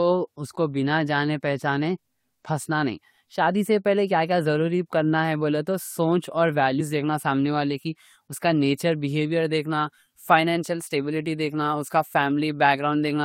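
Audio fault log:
6.79 s, compressed frames skipped: about two compressed frames never reach the output, so the speech jumps ahead by around 40 ms. On a spectrogram, a narrow seam; on the waveform, an abrupt envelope discontinuity.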